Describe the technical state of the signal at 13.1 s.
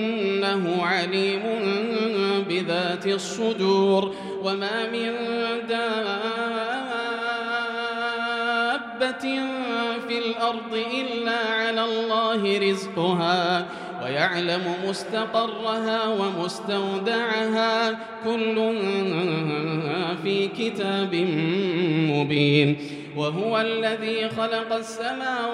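At 13.1 s the signal is intact, with no audible dropout, distortion, glitch or other fault at that point.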